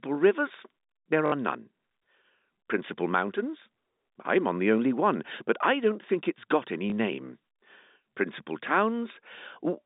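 Telephone-band speech, about 150 Hz to 3.7 kHz as you'd expect on a G.711 line, with packet loss with last packet repeated in two places. From 1.26 to 1.32 s there's a 60 ms robotic stutter that fits three lost 20 ms packets being replayed. A shorter 20 ms repeat leaves a small blip at 6.90 to 6.92 s, just after "think it's got any".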